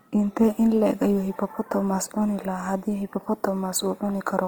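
Opus compression likely colours the whole speech clip. Band energy survives, but starved bands are filled with noise, so tones sound rough and grainy, which fits about 24 kbps.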